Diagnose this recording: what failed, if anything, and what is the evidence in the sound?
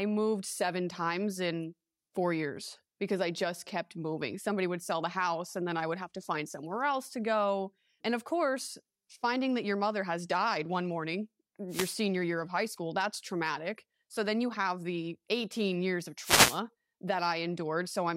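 The failure is in the analogue radio link ahead of the converter. There are two wireless microphone noise hits, at 11.69 to 11.98 s and 16.21 to 16.61 s. Each is a brief swish of static lasting roughly 0.3 to 0.4 s, laid over the speech. The FM carrier fades as reflected paths cancel at the receiver. Receiver noise then rises through the demodulated audio. When the signal recovers, the noise drops away.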